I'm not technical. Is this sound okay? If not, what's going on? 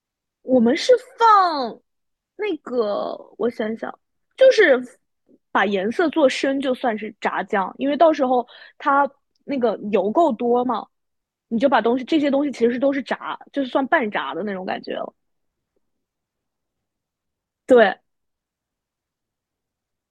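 Yes, nothing wrong can be heard anywhere in this speech recording.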